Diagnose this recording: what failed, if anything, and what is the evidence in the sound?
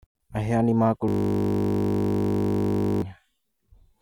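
The driver or buffer stage failed, a system hang loop. From 1.08 s to 3.02 s the speech gives way to a steady 50 Hz buzz: one 20 ms slice repeating nearly a hundred times while the hardware kept replaying its ring buffer during the freeze.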